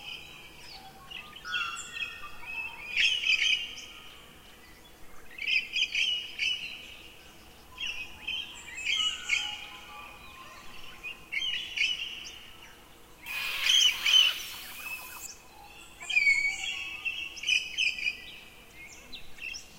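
A recording of everyday sounds in which pre-emphasis is left on from 13.26 to 15.26 s: an FM 75 µs treble boost, about 14 dB at 10 kHz relative to 1 kHz, was never de-emphasised, leaving the sound thin and bright.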